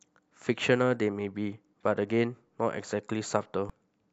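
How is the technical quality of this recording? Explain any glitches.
One glitch stands out, at 3.70 s near the end of the speech: a very brief burst of damaged data in a compressed stream, lasting only a few milliseconds. Corrupted bytes in the encoded stream left the decoder unable to read those frames cleanly, so it lost sync and searched for the next valid frame header. The result is a short blip. A plain dropout would leave silence, and a simple click would be a single sharp impulse.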